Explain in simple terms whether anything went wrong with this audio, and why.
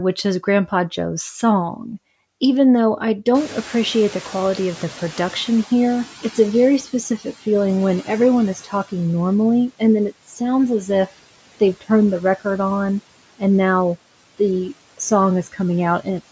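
Several things went wrong, all caused by the noise suppressor in the call's audio chain.

Noise suppressor artifacts run through the whole clip. The suppressor cuts the background noise hard between phrases and lets it back under the speech, so the noise pumps up and down.

From 3.34 to 7.36 s you hear the noise suppressor catching up. The room noise jumps sharply at about 3.5 s, and the suppressor's picture of the background takes about 4 seconds to adjust. During that time the louder noise comes through with less reduction, then gradually sinks.

Speech cut by the noise suppressor happens at 8.55–8.9 s, 10.11–10.4 s and 15.44–15.59 s. Each time, the suppressor mistook a soft stretch of speech for background and turned it down along with the noise, so roughly a tenth to a seventh of a second of sound there is swallowed or faint.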